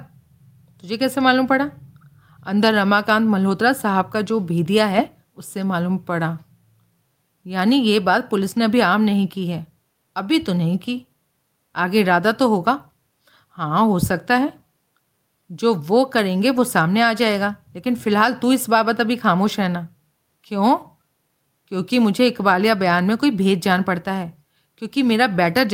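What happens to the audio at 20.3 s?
At 20.3 s the speech continues without interruption or audible defect.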